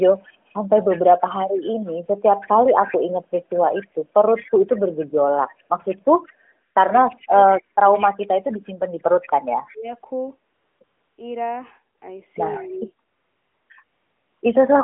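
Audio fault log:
0.79–7.03 s and 9.22–9.74 s, echo leak: a faint second copy of the speech trails the original by 169 ms, about 20 dB below it in the first stretch and about 25 dB below in the second. It sounds ghostly rather than reverberant, because it is a single discrete repeat. The likely cause is a far end on loudspeaker whose echo canceller let part of the returning sound through and sent it back down the line.
6.97–8.49 s and 9.68–9.87 s, speech suppressed in double talk: the talker's level drops sharply and in pieces, by as much as about 35 dB in the first span, where roughly a second is affected, and by about 20 dB over roughly 0.2 s in the second. Both dips begin as the echo stretches end. This is likely an echo canceller that could not separate the talker from the overlapping echo and attenuated everything at once.
10.54–10.80 s, 10.84–11.18 s, 11.98–12.02 s, 13.08–13.70 s and 13.84–14.42 s, AMR comfort noise: in these gaps, lasting 260, 340, 40, 620 and 580 ms, the real background is replaced by a smooth, even hiss that switches in and out. 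The phone stopped sending speech frames during the pauses, and the receiver filled them with synthetic noise built from a coarse level and spectrum description.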